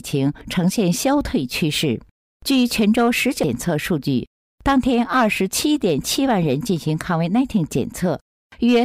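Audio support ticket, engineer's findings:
CD skip at 3.43 s. Laser pickup lost tracking and landed on a different turn of the disc spiral, likely from a knock or disc flaw. Brief mute of about 3 ms heard as a tick, then the audio resumes from another point.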